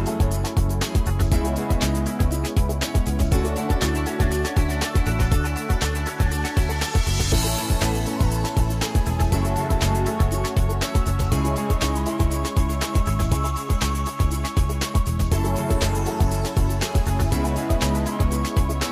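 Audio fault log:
No technical faults can be heard anywhere in the audio. There is nothing to log beyond this single line.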